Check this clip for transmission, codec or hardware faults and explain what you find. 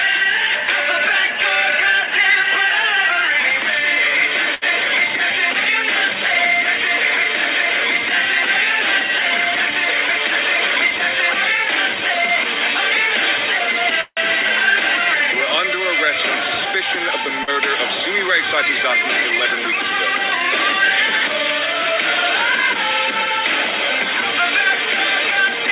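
Five network-related faults occur, all typical of a call path whose band stops at 4 kHz, consistent with G.711 mu-law at 64 kbps.

At 4.55 to 4.64 s, a short stall from a late packet: the buffer ran dry and the last sound was stretched by 72 ms. It is heard as a held sound, and on a spectrogram the harmonics run flat.

From 9.72 to 11.36 s and 16.16 to 17.33 s, the jitter buffer speed-up removed pitch-period slices to reduce delay. Playback runs at 103% and then 107%, cutting roughly 50 ms and 100 ms. The second stretch sounds hurried at unchanged pitch, and the waveform shows compressed timing.

At 14.01 to 14.19 s, a call audio freeze, likely caused by held-up packets, fills 159 ms. The last sound fades and ends in 30 ms of silence, visible as a decaying smear, then a blank gap.

At 17.43 to 17.49 s, a short concealed packet loss replaced 40 ms with a 42 ms synthetic fill. It sounds like a brief smear or wobble, with a blurred patch on the spectrogram.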